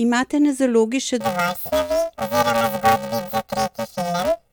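Planar audio read as interleaved begins at 1.20 s, right after "na zalogi še", and continues to the end of the speech. Each stereo block stores its left samples and then its right samples, but the player reads them as alternating left-right pairs. Every block therefore plays twice at double speed, so the overall pace is unchanged. Because the blocks here are short, about 2.9 ms, which fits a 128-sample block, the result is a robotic buzz at the 345 Hz block rate, with no clear octave shift.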